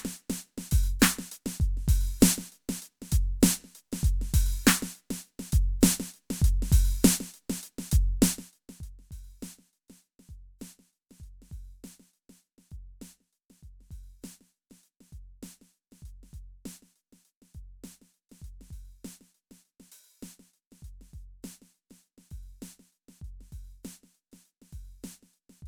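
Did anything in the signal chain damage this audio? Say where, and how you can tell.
Yes: zipper noise from 8.24 to 8.99 s, at the driver or buffer stage. A drop of about 25 dB in the music is applied in unsmoothed steps roughly 200 times a second, so each jump clicks into an audible zipping.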